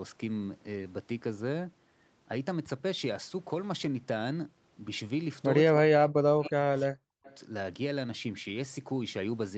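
This one's a speech recording over a call link, with nothing above 8 kHz, which fits Opus in a wideband mode. From 5.81 to 7.28 s the talker dips hard, by about 40 dB at worst, and breaks up for roughly a second and a half. That's speech suppressed in double talk, likely the echo canceller ducking everything while both ends spoke at once. There's also echo leak: faint delayed copies arriving 296 ms late, at 6.43 s (about 20 dB down) and 7.25 s (about 30 dB down), likely residue a loudspeaker-side canceller didn't fully remove.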